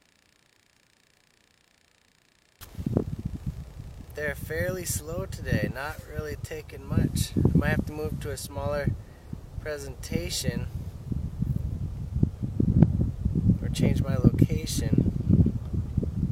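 From 6.63 s to 8.69 s the receiver loses its digital stream and performs a digital radio blending to analogue, cross-fading over about 0.44 s to the FM broadcast and back. Faint hiss, roughly 35 dB below the signal, comes up, and the level shifts by about 1 dB.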